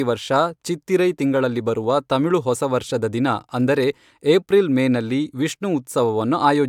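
A short piece of recorded speech, and nothing technically wrong turns up anywhere in it.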